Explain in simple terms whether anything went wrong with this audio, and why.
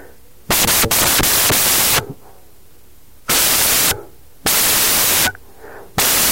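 Something went wrong from start to finish: the samples were built from the wrong bytes. Each sample in the file is stored as more than one byte, and the player combined them incorrectly, either in the wrong order or shifted by one byte. The small, rapidly changing part of each value ends up acting as the large part, so the speech comes with loud, harsh hiss.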